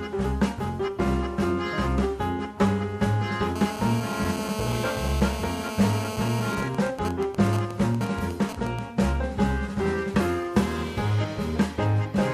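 From 3.56 to 6.55 s, a GSM phone buzz sits under the sound. A nearby 2G phone is on a call, pulsing its transmitter about 217 times a second. The audio circuit rectifies those pulses. The result is a hard, raspy 217 Hz buzz, rich in harmonics, about 8 dB below the signal.

At 6.57 s the buzz gives way to GSM signalling bursts, lasting until 8.79 s. The phone is still in the call, but its user has gone silent, so it transmits only short groups of bursts. These come through as even ticks with a longer 217 Hz buzz twice a second, roughly 10 dB below the signal.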